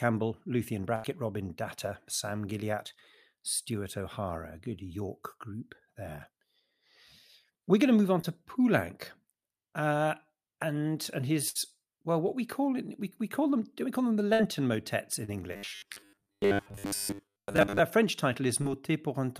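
At 0.95 to 1.06 s a burst of packet loss cuts in. About 80 ms never arrived. The receiver stretched the last sound and faded it to cover the lost audio.

At 8.22 to 8.25 s, just after "going to move on", there is a short concealed packet loss. About 20 ms went missing. The decoder filled the gap from the preceding sound, leaving a brief smear.

Two more bursts follow. One spans 11.49 to 11.57 s, between "uh and and" and "well what we call". The other spans 14.33 to 14.41 s, after "we call them the". Each loses about 60 ms to a fading extension of the last sound.

At 15.25 to 15.30 s, another short concealed loss gives a quick wobble.

From 15.53 to 17.79 s the sound turns robotic. A rigid, metallic buzz at 100 Hz sits over it. Most of the real audio in this stretch is skipped. The likely cause is a 10 ms buffer being repeated while new audio arrives too seldom.

At 18.62 to 18.67 s, a final short concealed loss of about 40 ms leaves a brief smear.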